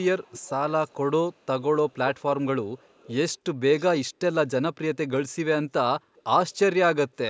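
A loudspeaker-side echo canceller likely failed to remove everything its microphone picked up. This echo leak sends back a faint delayed copy of the speech, trailing 383 to 405 ms behind. It is roughly 20 to 40 dB down, at 0 to 0.5, 0.87 to 0.94, 1.33 to 2.22, 2.77 to 3.34, 3.79 to 3.84 and 6.15 to 6.22 s.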